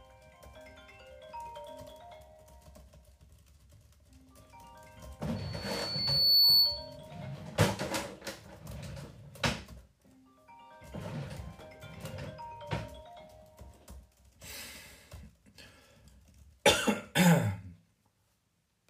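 From 5.36 to 6.97 s, loudspeaker feedback squeal: a 4.4 kHz tone swells over about a second as the mic hears its own speaker, ending roughly 15 dB above the sound.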